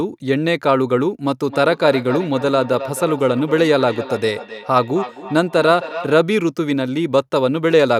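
From 1.49 to 6.21 s there is feedback echo between two devices. Another device in the room replays this speech, and the microphone captures it again. Each phrase returns roughly a third of a second later, thinner and ringing. The loudest repeats sit about 12 dB below the speech.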